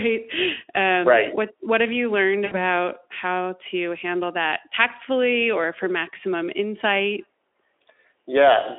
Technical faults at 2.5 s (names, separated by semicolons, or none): VoIP packet loss concealed by the speech codec